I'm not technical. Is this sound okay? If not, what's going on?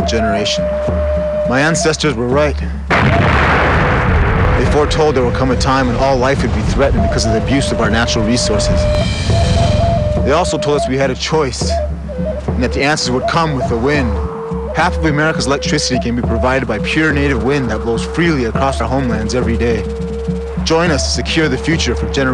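No. There are two loud pops, at 4.45 to 4.47 s and 8.95 to 8.97 s. Each is a sharp click well above the surrounding sound, likely from a sudden electrical jolt such as a plug, switch or static spark.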